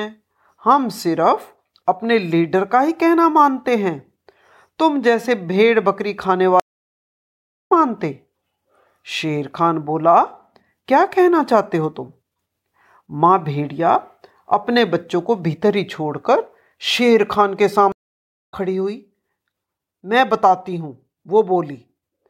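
At 6.60 s and again at 17.92 s the speech drops out in a stream reconnect: the connection broke and playback restarted mid-stream. Silence lasts 1.11 s then 0.60 s, and the speech resumes about one and a half seconds, then four tenths of a second, further on.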